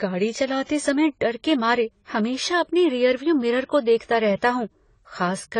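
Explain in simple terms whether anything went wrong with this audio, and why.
Yes, throughout the speech nothing is heard above 10 kHz, so it sounds dull. This is likely low-bitrate audio saved at a high bitrate: the lost detail cannot return.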